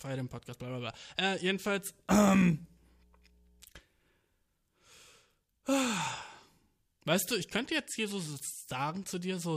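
From 2.17 to 3.67 s, mains hum appears: a steady low tone at 60 Hz, roughly 35 dB below the speech, where power-line current has leaked into the signal path. Unlike broadband rumble, it holds one fixed pitch with some low harmonics.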